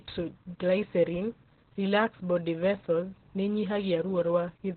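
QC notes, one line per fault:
Throughout, Opus voice compression: the speech is heavily damaged, sounding muffled, hoarse and a little robotic, as the SILK linear-prediction coder has narrowed the band and coded the excitation coarsely, which fits narrowband operation at a low bitrate near 8 kbps. On a spectrogram, energy stops abruptly at about 4.2 kHz with an empty region above, and harmonics below look smeared and grainy. The waveform shows no clipping or gaps.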